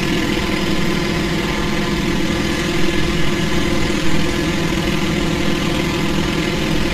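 Everyday sound recording, affected by two faults from start to finish. The first is channel delay (comb filtering): one channel arrives about 5 ms behind the other, and when the two are folded to mono, the shared content cancels at regularly spaced frequencies. The first notch sits around 100 Hz, with further dips repeating up the spectrum, so the whole recording sounds hollow and phasey, with a thinned-out low end. The second is a codec problem, likely HE-AAC compression at a low bitrate, which fits something near 24 kbps. The upper spectrum is rebuilt from copied lower bands rather than carried faithfully, so the treble has a synthetic, gritty, metallic edge that does not line up with the lower content. Nothing is present above 14.9 kHz, and the coding damage is plainly audible throughout.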